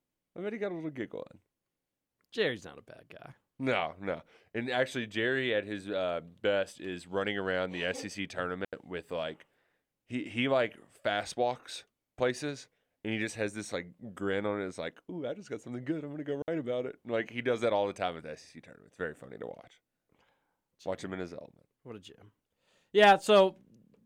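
At 8.65 s, right before "with like he he", the speech drops into a clean hole for about 84 ms, then again at 16.42 s for 60 ms between "good I'm gonna go" and "about it". Both are digital wireless dropouts: the receiver lost too much data and muted quickly, with no noise burst around either gap.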